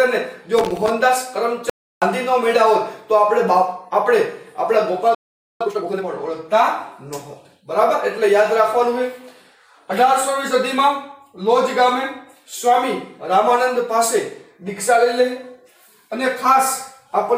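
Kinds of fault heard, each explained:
loose connector crackle: From 0.59 to 0.90 s an irregular burst of scratchy crackle breaks through as a worn or dirty contact chops the signal on and off. Its ragged, uneven texture sets it apart from the clean, complete gaps that follow later.
audio dropout to silence: From 1.70 to 2.02 s the sound cuts out for about 320 ms into silence with no room tone, likely because the input was briefly lost while recording continued. That stretch of material is simply gone rather than delayed.
playback stall: At 5.15 s the sound halts for about 460 ms, likely because the player ran short of data, then resumes at 5.61 s. Unlike the earlier dropout, this pause is followed by a hurried passage as the player works through its backlog.
time-compressed catch-up: From 5.61 to 6.05 s, immediately after the stall, the audio plays at 2.0 times its normal rate while keeping its pitch. 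A plain speed-up would raise the pitch, but here only the pace rushes.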